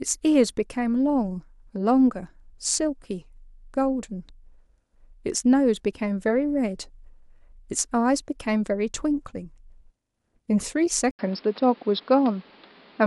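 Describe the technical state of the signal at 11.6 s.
At 11.6 s the speech sounds dull and boxy, with nothing above 5.4 kHz, a new background noise sitting roughly 30 dB under the signal, and a level shift of around 5 dB. This began at 11.11 s after an 80 ms gap and runs to the end of the clip. The cause is likely an input switched to a poorer device, where a narrower-band microphone with its own tone and noise took over mid-recording.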